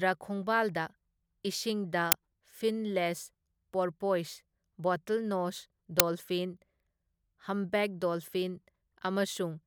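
At 2.12 s and again at 6.00 s, just after "ꯄꯣꯔꯄꯣꯏꯁ ꯕꯣꯇꯜꯅꯣꯁ", you get an uninitialised buffer: a loud 5.8 ms crack where stale memory got played instead of speech, which fits a 256-sample buffer going out before it was filled.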